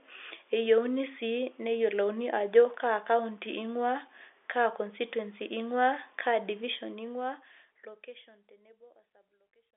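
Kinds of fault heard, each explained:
No faults are heard in this speech. It carries the narrow band of a telephone line, with nothing above 3.7 kHz, and the level eases down smoothly from about six and a half seconds to the end.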